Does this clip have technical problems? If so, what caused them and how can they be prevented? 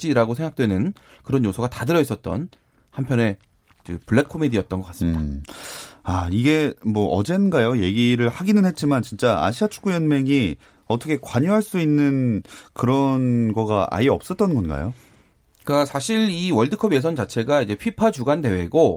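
No, there's nothing technically wrong to hear in this speech clip, so there's nothing to prevent here.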